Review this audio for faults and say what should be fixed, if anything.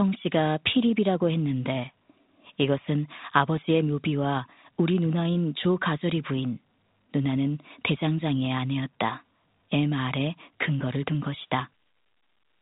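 Nothing here needs fixing; no faults are audible.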